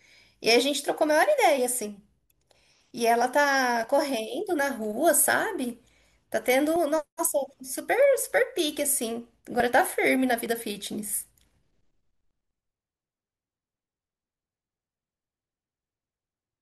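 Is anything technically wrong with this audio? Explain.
Yes. At 6.76 s and again at 9.6 s the speech jumps abruptly, with no gap of silence; the first skip takes away a few tens of milliseconds, the second a shorter sliver of roughly a couple of hundredths of a second. This is likely a dropped buffer (overrun): the recording software fell behind, the hardware overwrote audio not yet collected, and the surviving sound on either side was spliced directly together.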